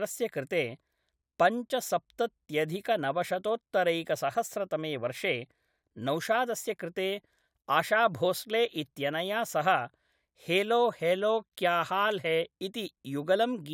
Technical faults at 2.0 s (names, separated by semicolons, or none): none